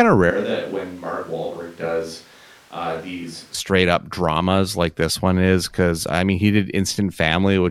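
From 0.30 s to 3.54 s the speech turns suddenly roomy and hollow, with thinner bass, a drop of about 10 dB and a noise floor roughly 25 dB below the speech, before the close sound returns abruptly just ahead of "up dramas like this". The likely cause is a switch to a distant microphone. On the waveform the envelope steps down and smears; the spectrogram shows weakened low frequencies, blurred reverberant tails and a raised noise band between words.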